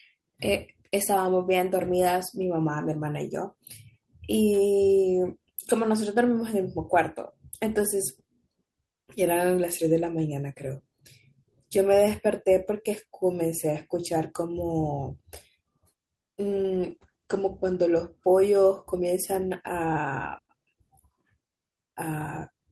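A call bitrate drop runs from 16.41 to 18.25 s. The connection's bandwidth estimate fell, so the encoder had to squeeze the speech into far fewer bits, which fits a fall from about 32 kbps to roughly 12 kbps. Coding turns coarse and the upper band is cut, bringing the audio bandwidth down from 20 kHz to 8 kHz. For about 1.4 s at the worst point the speech sounds muffled and rough, then brightens as the bitrate recovers.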